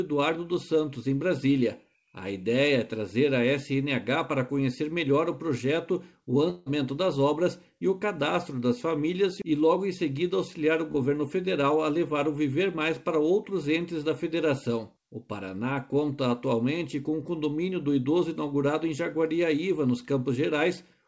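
At 6.50 to 6.68 s the stream most likely suffered a long network dropout: about 160 ms of audio never arrived, and the receiver filled the whole gap by extending the last sound. It comes through as a fading buzz or hiss with no true silence before the audio resumes, minus the lost stretch.

At 10.92 to 10.96 s a short concealed packet loss removed 20 ms before decoding. The receiver patched the hole by continuing the preceding sound and blending back in, producing a brief smear or wobble in audio that already stops at 8 kHz.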